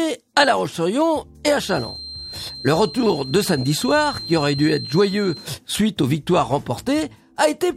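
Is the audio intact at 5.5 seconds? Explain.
No. At 5.5 seconds a feedback whistle is still sounding, in its final moments. It is a thin, steady tone at 4.2 kHz, sitting about 15 dB beneath the main sound and swelling and fading slowly in level, running from 1.55 s to 5.53 s. The likely cause is a loudspeaker-to-microphone loop held right at the edge of feedback: that one frequency keeps recirculating and sustaining itself without building up into a runaway howl.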